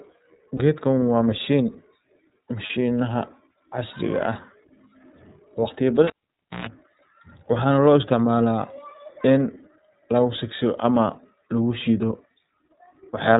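From the first moment the speech sounds narrow and slightly rough, with a faintly synthetic edge and no brightness above about 4 kHz. That is the iLBC codec at work. It is a narrowband VoIP codec that codes each block of the signal on its own, and the plainly audible roughness fits its 13.33 kbps mode with 30 ms frames. Anything beyond the telephone band is discarded, and the coarse excitation coding leaves that buzzy texture.

At 0.57 s and again at 2.66 s the voice briefly freezes into a short held, buzzy tone for a few hundredths of a second. These are lost iLBC frames. Each gap fits a single missing 30 ms frame, which the decoder concealed by repeating the last pitch cycle with some noise mixed in. Because iLBC frames stand alone, the speech snaps back to normal immediately after each dropout.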